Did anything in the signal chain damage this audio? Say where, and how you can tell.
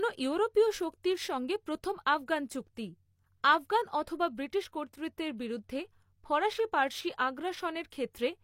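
Yes. At about 1.03 s, just before "সঙ্গে প্রথম আফগান চুক্তি", a short hiss of roughly 12 ms runs ahead of the attack, which then lands soft and smeared rather than crisp. This is pre-echo from the codec stage. A transform coder spread its quantisation noise across the whole block, so noise sized for the loud onset also filled the quiet moment just before it.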